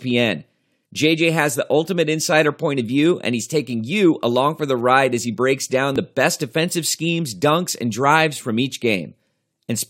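At 5.96 s, between "as he breaks down" and "the best defensive schemes", a tiny skip: an overlap between stream segments trimmed genuine speech, so the waveform jumps.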